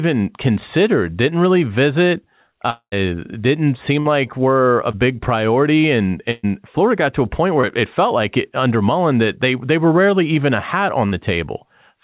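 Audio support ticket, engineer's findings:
Long network dropout, 2.70–2.94 s, right after "considered didn't really visit". The last sound is held as a fading buzz or hiss, then about 80 ms of silence. Roughly 220 ms of audio is gone when speech resumes. Likely cause: a network outage, with the jitter buffer concealing until it gave up.

Burst of packet loss at 4.00–4.07 s, 6.31–6.45 s and 11.07–11.14 s, the last just after "rarely even a hat". The decoder extends the preceding sound and ramps it down. About 60 ms, 120 ms and 40 ms are missing. The 120 ms gap never drops to silence.

Short concealed packet loss at 4.91–4.95 s and at 7.61–7.65 s, between "got to a point" and "it it felt like". Each is a brief smear where about 20 ms failed to reach the decoder in time. The gap is bridged by extrapolating the previous sound, then cross-faded back. Band-limited call path, with nothing above 4 kHz, which fits G.711 A-law at 64 kbps.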